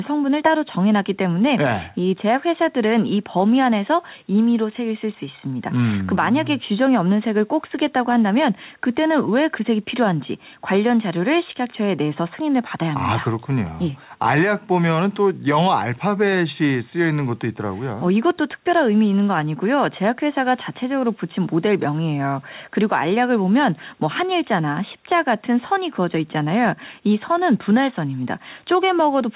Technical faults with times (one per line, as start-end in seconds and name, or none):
none